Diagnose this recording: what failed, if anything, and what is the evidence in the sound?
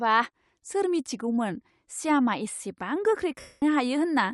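Codec stage: the speech carries a plainly audible breathy, grainy haze across the upper band throughout, likely Bluetooth LC3 compression at a modest bitrate filling discarded highs with noise.

Wireless link: lost LE Audio frames from 3.40 to 3.62 s. The decoder repeats the last spectrum with scrambled phase, so the sound smears into noise and fades over about 220 ms.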